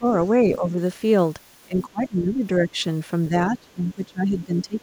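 Speech level sags at 0–0.06, 0.5–0.79, 1.65–2.76 and 3.29–4.79 s, by up to about 20 dB in the last two. This is likely speech suppressed in double talk, with the echo canceller ducking the near talker while the far side spoke. The waveform envelope narrows and the spectrogram fades there.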